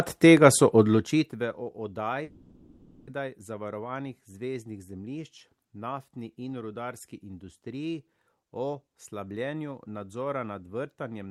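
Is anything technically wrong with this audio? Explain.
Yes. From 2.23 s to 3.10 s the speech breaks off and is replaced by a smeared continuation of the last sound, a buzzy, hiss-like tail lasting about 0.84 s. The likely cause is a long network dropout: packets stopped arriving, and the receiver's concealment stretched the final received audio across the gap instead of leaving it silent. When the signal resumes, the speech picks up further along, and the 0.84 s that was never delivered is lost.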